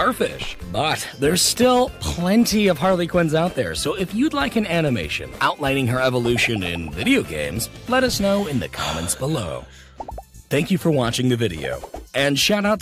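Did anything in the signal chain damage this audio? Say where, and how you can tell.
No, nothing in the signal chain has audibly damaged this audio, and no stage from capture through to playback has left an identifiable mark on it.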